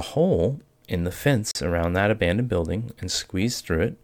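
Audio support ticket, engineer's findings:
Likely Bluetooth stall, 1.51–1.55 s: headphone buffer ran dry while packets were held up; speech cuts to silence for about 40 ms, then resumes.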